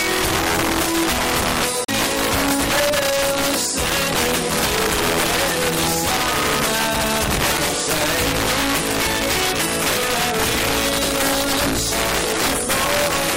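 From start to finish, loud peaks break into violent cracks from integer overflow: the signal is driven about 8 dB past the integer limit, and a few percent of samples wrap to the opposite sign. On a waveform the tops flip to spikes of the wrong polarity, and a spectrogram shows broadband vertical streaks.

Throughout, the sound is watery and swirly, with smeared attacks, likely from MP3 compression at a bitrate that fits about 64 kbps. A spectrogram shows high-frequency patches flickering on and off between frames.

From 1.84 to 1.90 s, damaged data in a compressed stream disrupts the sound. The decoder misreads corrupted frames and resyncs on the next header. It appears as a scrambled block in the spectrogram and a discontinuity in the waveform.

At 7.57 s a second, briefer corruption occurs. The decoder again loses and regains frame sync. The spectrogram shows a thin smeared sliver, and the waveform shows a small break in continuity.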